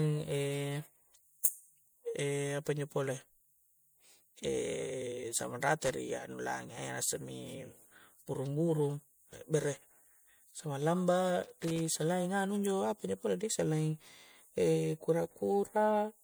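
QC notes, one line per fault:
Throughout: generation loss. The speech has a swirly, hollow, smeared quality with softened consonant attacks, more degraded than a single encode at 96 kbit/s would leave. This most likely comes from the audio passing through MP3 about three times, each pass requantising on a shifted frame grid so noise and spectral gaps stack up. Unlike a single low-bitrate encode, the damage sounds layered and churning, and content survives up to about 21 kHz.
5.84–5.93 s and 11.43–11.86 s: loose connector crackle. Two irregular bursts of scratchy crackle, the first brief and the second lasting about 0.4 s, chop through the speech. A worn or dirty contact making and breaking as it shifts interrupts the signal, and any DC on the line adds pops. Unlike steady clicks or dropouts, the bursts are erratic in spacing and texture, like rubbing a bad cable.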